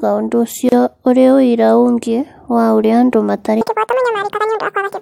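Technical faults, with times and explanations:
0.69 to 0.72 s, gap at a join of encoded pieces: just before "ũrĩ ũira" the speech drops out for about 32 ms, with edges smeared by the codec, then picks up right where it left off. That points to separately encoded chunks spliced without trimming, so the encoder's start-up delay and last-frame padding stay in as silence. The 4 s spacing of these joins suggests the audio was cut into 4-second pieces.
3.61 s to the end, section at the wrong speed: right after "wa ũrĩa andũ matarĩ" the speech suddenly runs at double speed, hurried and squeaky, with pitch jumping up by roughly ten semitones. Speed and pitch move together, so this isn't a pitch effect. The final stretch is simply playing back too fast, most likely because an editor or player handled that section against the wrong clock rate.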